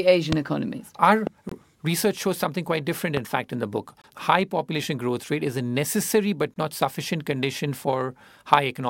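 A sudden voltage pulse, likely from a plug, switch, static discharge or driver glitch, lands on the signal at 0.32–0.35 s, adding a loud pop that jumps roughly 20 dB above the speech. The speech carries on beneath this sharp thump. A second loud pop follows at 1.27–1.29 s, about 15 dB above the signal.

At 1.49–1.52 s the stream shows a gap between chunks. The audio arrives in 2.5 s blocks, and a 23 ms stretch of silence is left at the join. No speech is lost, but the flow is interrupted by a short hole.

A third loud pop, again around 15 dB above the speech, hits at 3.17–3.19 s. The chunk gaps repeat at the same 2.5 s spacing, at 4.02–4.04 s and 6.54–6.56 s. Each is another 23 ms dropout that sounds like a short hole.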